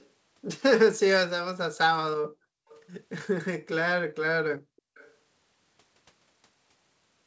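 At 0.00 to 0.08 s, 2.69 to 2.80 s and 4.61 to 5.13 s, a faint delayed copy of the speech surfaces, trailing the original by 355 ms. This is an echo leak, likely from a far-end loudspeaker whose echo canceller let part of the returned signal through. Unlike room reverberation, which smears into a continuous tail, this is a distinct late repeat: very quiet, limited like the rest of the audio to below 8 kHz, and longest in the final stretch.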